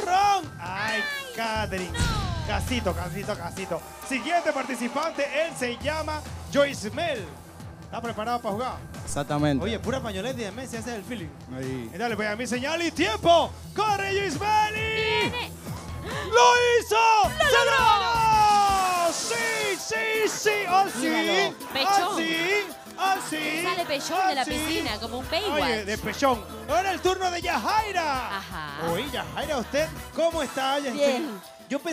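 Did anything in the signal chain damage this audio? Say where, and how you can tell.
Yes, there's a DC step at about 9.09 s, and it comes from the converter or analogue input stage. You hear it as a single low thump while the sound itself carries straight on. The zero line of the waveform jumps by about -30 dBFS, the kind of shift you get when a converter recalibrates or an offset-carrying input gets switched in. Then it bleeds away, the way a 2 Hz high-pass pulls an offset back toward zero.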